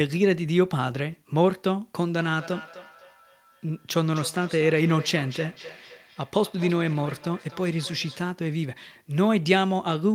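A speech recording carrying a feedback echo between two devices from 2.11 s to 8.3 s. The speech returns at a steady interval of roughly a third of a second, peaking about 18 dB below the direct sound. The regular repeat spacing sets it apart from room reverberation, which smears rather than repeats. It points to a second device in the room replaying this call into a microphone whose echo canceller only removes its own playback.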